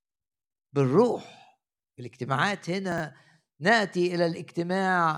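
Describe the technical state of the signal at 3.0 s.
Right around 3.0 s you're at the tail end of a chunks out of order glitch running from about 2.92 to 3.0 s. One 20 ms slice of the speech got delivered late and plays three chunks after where it belongs, so that 80 ms stretch is shuffled. Nothing's actually missing, but the reordering leaves three hard joins, and you hear it as a quick garbled, jumbled blip.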